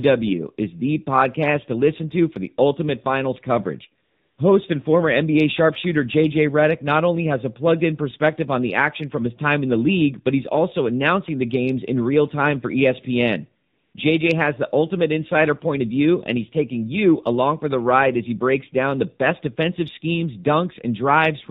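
From start to finish the speech sounds muffled and buzzy, with nothing above 4 kHz and a synthetic edge on every syllable. That is the AMR narrowband mobile codec, whose plainly audible damage fits a low mode of about 7.4 kbps, rebuilding the voice from a coarse vocal-tract model.

Right after "the ultimate finals coverage", from 4.04 to 4.38 s, the background gives way to a smooth, even hiss that switches in and out abruptly. A shorter patch follows from 13.68 to 13.94 s. This is AMR comfort noise: the phone judged the talker silent and stopped sending speech for about 340 ms and then 260 ms, and the receiver filled each gap with generated noise.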